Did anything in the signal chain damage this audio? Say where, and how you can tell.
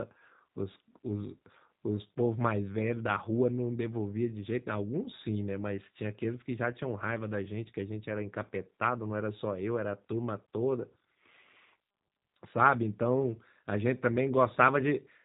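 Yes. For the whole clip the speech has a rough, slightly buzzy, synthetic edge, and the top of the spectrum stops dead at about 3.8 kHz. That points to the codec stage: G.729 (the G.729A variant) compression, a narrowband coder that fits 8 kbit/s VoIP. It rebuilds each 10 ms frame from a vocal tract filter, a pitch predictor and a few coded pulses. That sparse resynthesis produces the plainly audible roughness, and the coder's narrowband design sets the band limit.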